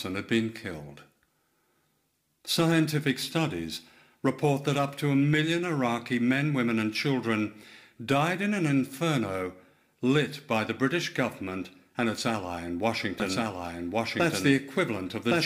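From 13.2 s to the end, the sound suddenly doubles: a second, equally loud full-band copy trails about a second behind, with no decay or room colour. This doubled audio track likely comes from a second, slower capture path or an edit leaving two misaligned copies.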